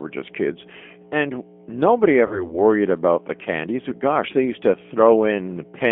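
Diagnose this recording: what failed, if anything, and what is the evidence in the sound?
Mains hum sits under the whole recording: a steady 60 Hz tone with low harmonics, only about 15 dB below the speech. That is loud enough to hear continuously between phrases. The fault is in the analogue wiring stage. A ground loop, or a transformer close to the microphone or preamp cabling, is coupling the 60 Hz power-line frequency into the signal path before conversion, so the hum is baked into everything downstream.

The G.729 codec has done plainly audible damage throughout. The band is confined to roughly 200 Hz to 3.4 kHz, so there is no low body and nothing of the upper sibilance. The speech has the slightly rough, synthetic quality of a model-based coder, which fits G.729A at 8 kbit/s. The codec rebuilds each 10 ms frame from a vocal tract filter, a pitch predictor and a few pulses.

VoIP packet loss concealed by the speech codec appears at 2.27 s. 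About 40 ms of audio went missing, which points to two 20 ms packets lost on the network. The decoder filled the gap by extrapolating its last pitch and filter with falling gain, which gives a brief fading smear. Because each frame builds on the previous one, the speech stays weak and distorted until about 2.58 s, well after packets resume.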